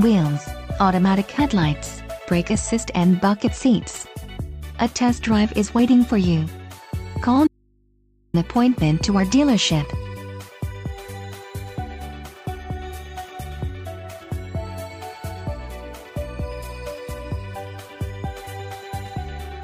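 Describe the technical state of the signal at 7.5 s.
The wanted signal was likely lost upstream while the path after the break stayed live, causing an audio dropout to a faint residue from 7.47 to 8.34 s. For about 0.87 s the sound cuts abruptly to mains hum roughly 40 dB below normal level.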